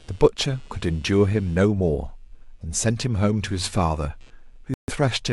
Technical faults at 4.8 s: computer activity noise; Bluetooth stall

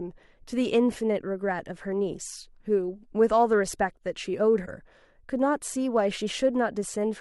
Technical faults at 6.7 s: none

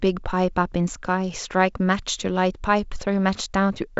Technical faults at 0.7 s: none

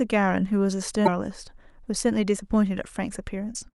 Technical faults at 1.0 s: damaged data in a compressed stream

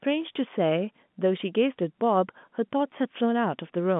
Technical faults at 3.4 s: none

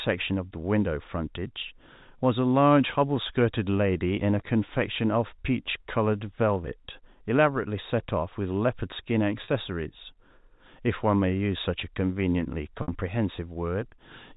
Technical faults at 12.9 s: packet loss with pitch repetition

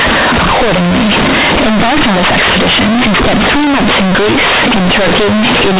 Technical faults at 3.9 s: companded audio read as linear

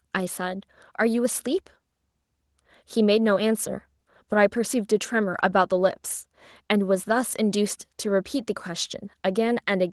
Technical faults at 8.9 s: none

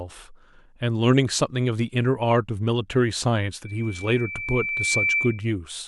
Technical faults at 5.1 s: loudspeaker feedback squeal

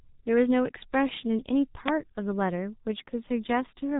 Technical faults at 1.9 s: G.723.1 codec; uninitialised buffer

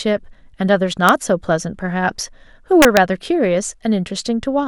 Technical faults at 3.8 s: none

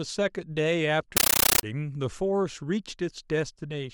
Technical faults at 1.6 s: compressed stream played as audio

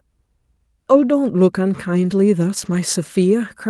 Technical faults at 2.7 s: lost packet rebuilt from error correction

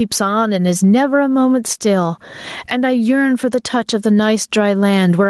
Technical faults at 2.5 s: gain pumping

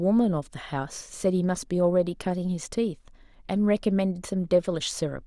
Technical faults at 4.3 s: none

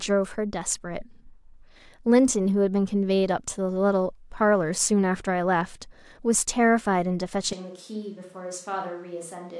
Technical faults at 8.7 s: switch to a distant microphone

